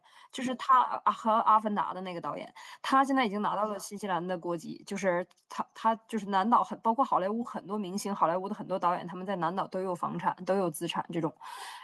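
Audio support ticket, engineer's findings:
Listened to the whole speech clip and found nothing to report, so no faults to log on this ticket.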